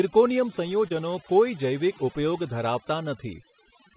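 Throughout the speech there is overdone noise removal. An over-aggressive suppressor has pushed individual frequency bands down whenever they fell near its noise estimate. Quiet parts of the voice went with them, leaving a near-silent background with twinkling specks. On a spectrogram this shows as isolated flickering blobs in the gaps and ragged, hollowed-out harmonics. The spectrum also stops flat at 4 kHz, as expected from the narrowband call path.

From 0.88 to 0.92 s there is a short concealed packet loss. About 20 ms of audio never arrived, and the receiver filled it by extending the preceding sound before blending back. It is heard as a brief smear or wobble. The waveform shows a suspiciously smooth, repetitive stretch, and the spectrogram shows smeared, slightly blurred harmonics.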